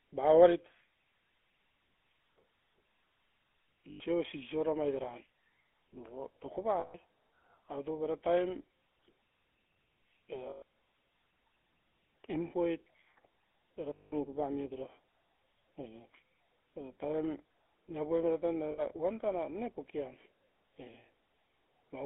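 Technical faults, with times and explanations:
Throughout: GSM full-rate codec. Band-limited to about 250 Hz–3.5 kHz, with buzzy, gravelly pulse-excited roughness fitting 13 kbps GSM. A spectrogram shows nothing above 3.5 kHz and coarse, smeared harmonics.
3.90–4.01 s, 6.80–6.95 s, 10.50–10.62 s, 13.94–14.27 s, 18.72–18.96 s: lost GSM frames. The decoder repeats the last good frame, giving a rough metallic ring. Spectrograms show frozen bands.
6.06 s: DC step. The waveform's zero line jumps and then drifts back slowly, heard as a low thump while the speech continues unchanged.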